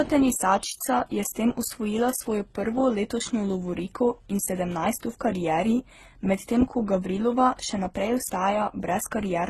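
Through the speech, everything stops at 12.3 kHz and several codecs' artefacts pile up: likely transcoding between lossy codecs, fitting MP3 into Opus into HE-AAC.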